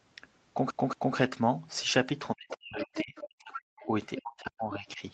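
Right at 0.71 s there's the CD stuck on one turn effect: a chunk of about 0.23 s plays twice more through 1.16 s, each repeat butting in with a tiny mute at the jump. It's the quick, even stutter you'd get from a laser hopping back over a scratch.

From 2.35 to 3.88 s, and again from 4.2 to 5.01 s, the talker keeps ducking, thinning out or dropping in pieces, at worst by around 40 dB. That's speech suppressed in double talk, likely an echo canceller clamping down on both voices while the far end was talking too.

Inside those stretches you can catch the other side's voice leaking through, at 2.49 to 2.57 s, 2.82 to 3.26 s, 3.53 to 3.61 s, 3.82 to 3.87 s and 4.17 to 4.21 s. They sit roughly 10 to 25 dB under the talker, likely loudspeaker echo the canceller didn't fully remove.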